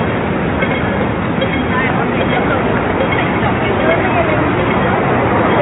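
No technical fault can be heard anywhere in the audio.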